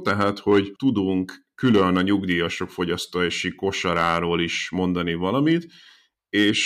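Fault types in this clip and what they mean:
Hard clipping: the speech drives a stage past its ceiling, so peaks are sliced flat and gain high harmonics; here a crackly fuzz on loud stretches near 0.07–0.98, 1.65–2.40 and 3.88–4.36 s, overdriven by about 5 dB, unlike soft saturation's rounded, warmer distortion.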